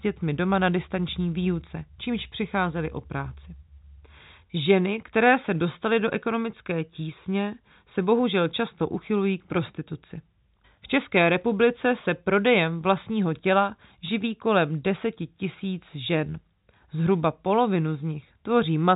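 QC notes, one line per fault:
No faults found in this telephone-band speech.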